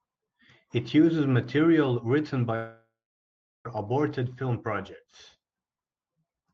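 At 2.55 s, just after "uses material written", the speech gives way to a buzzy smear of the last sound that fades, leaving about 0.71 s of silence before speech resumes at 3.67 s with "aborted film projects". About 1.1 s of speech is simply gone. This is most likely a long network dropout: no packets arrived, so the receiver stretched the final sound, let it decay, and skipped the lost stretch. The call codec's top end stops near 8 kHz.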